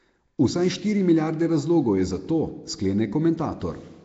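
From start to finish the speech carries a rough, hissy halo and a smeared, underwater feel, and nothing comes through above about 7.7 kHz. That pattern is most likely Nellymoser compression, the old Flash microphone codec, at a rate that points to around 32 kbps. It codes short blocks with very few bits per sample, so the weaker bands get no bits and are filled with noise. That's where the grainy fizz and the blurred edges come from, and here the damage is plainly audible.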